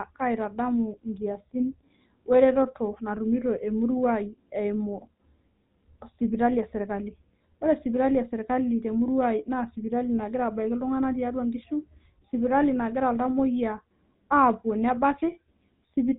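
Throughout the speech, GSM full-rate codec damage is plainly audible. The codec rebuilds the voice from a vocal-tract model driven by sparse, evenly spaced pulses. Nothing above 4 kHz survives. The result sounds buzzy and gravelly, which fits a 13 kbps GSM full-rate coder.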